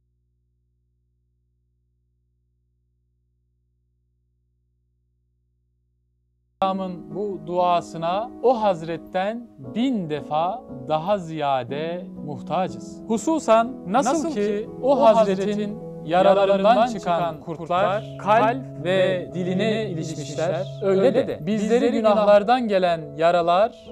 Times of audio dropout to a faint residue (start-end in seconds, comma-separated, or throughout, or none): 0.00-6.62